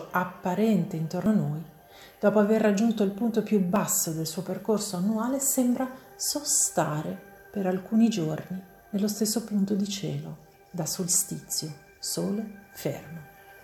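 At 1.26 s, 3.76 s and 6.3 s the sound jumps forward. No gap is heard. Roughly 70 ms vanish at the first two, about 20 ms at the third. This is likely a dropped buffer (overrun), with unread samples overwritten.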